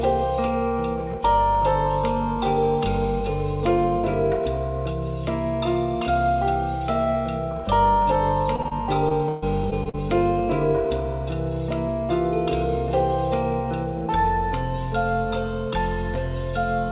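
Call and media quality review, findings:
Short concealed packet loss at 8.56 s, 8.62 s and 8.68 s: three brief smears or wobbles about 40 to 50 ms long, roughly 20 ms apart. Each hole fits one missing 20 ms packet. The jitter buffer and decoder concealment extended the last sound to cover the gap, then cross-faded back into real audio.

Repeated packet loss (robotic sound) from 9.09 to 9.97 s: choppy stretch from five separate gaps. The longest gap is 134 ms, and about a quarter of the span is patched. Total missing audio is about 240 ms, which points to a burst of lost or late packets on the receive path. Concealment restarts before it can recover, which produces the robotic texture. Nothing is present above 4 kHz across the call, consistent with a narrowband G.711 codec.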